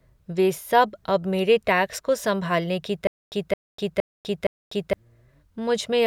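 From 3.07 to 4.93 s the speech breaks into a stutter with silent gaps. A 217 ms fragment repeats four times, each followed by about 248 ms of digital silence. This likely comes from a stalled player.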